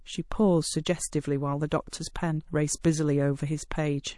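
Speech carrying plainly audible MP3 compression damage throughout: the sound is watery and swirly as weak frequency lines drop in and out from frame to frame, with metallic chirping on sibilants. That degree of damage points to a low bitrate, likely around 48 kbps, where the encoder sheds high-frequency detail to stay within budget. Pre-echo appears at three attacks: 1.68 to 1.72 s (31 ms of spread, noise about 18 dB above the preceding quiet), 1.90 to 1.93 s (28 ms, about 23 dB), and 2.81 to 2.84 s (35 ms, about 22 dB). Each onset is preceded by a brief hiss and sounds softened. The quantisation noise sized for the loud attack is spread across the whole transform block, so it fills the quiet moment before it. The length of the smear is consistent with a window of roughly 48 ms and an encoder that stays in long blocks rather than switching to short ones at transients.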